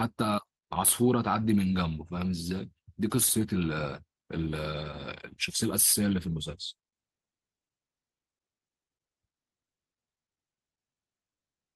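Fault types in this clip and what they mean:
Skip ahead: At about 3.3 s playback jumps forward with no gap. Roughly 0.7 s of speech that had piled up behind a delay was discarded, and the audio on either side of the cut is butted directly together.
Jitter buffer speed-up: From 3.39 to 4.48 s and again from 5.49 to 7.58 s, the receiver trimmed tiny pitch-period slices to drain excess buffered audio. Speech runs about 10% and then 8% faster at unchanged pitch, sounding hurried.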